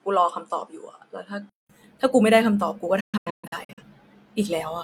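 From 0.0 to 1.70 s the speech sounds duller, with nothing above 11.4 kHz. It is about 5 dB quieter and has its own faint noise floor, roughly 50 dB down. A 200 ms silence marks the change. The likely cause is an input switched to a poorer device.

From 3.0 to 3.83 s a digital broadcast dropout breaks the sound. The receiver muted while frames were lost. About 470 ms goes missing in short holes scattered over 768 ms. The longest hole is 128 ms, and each edge fades within 8 ms.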